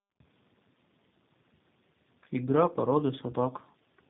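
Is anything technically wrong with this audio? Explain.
Yes. Throughout the clip there is tandem speech coding: two narrowband speech codecs in a row, the last likely G.729A, the second re-encoding the first's output. Nothing reaches above 3.8 kHz, and the roughness, muffling and warble are compounded, worse than one low-bitrate codec alone.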